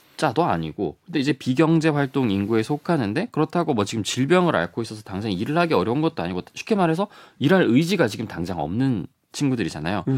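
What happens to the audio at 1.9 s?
At 1.9 s the speech carries on intact, with no dropout, click, distortion or other fault at that point.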